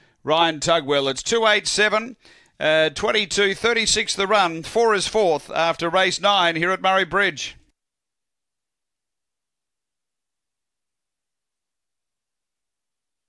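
No technical faults are audible anywhere in the recording.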